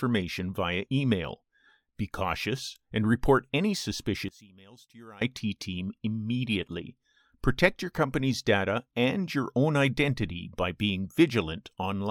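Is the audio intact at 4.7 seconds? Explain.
No. From about 4.29 to 5.21 s the level collapses by about 23 dB and what's left sounds faint. That's likely one channel inverted: one side of the stereo pair has its polarity flipped, so when the two are summed to mono, everything they share cancels out. What survives is only the small difference between the channels, a faint copy of the material rather than the full sound.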